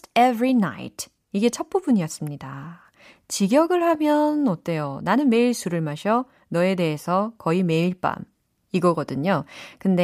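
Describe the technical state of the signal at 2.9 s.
At 2.9 s the speech signal is intact, with no audible technical fault at that moment.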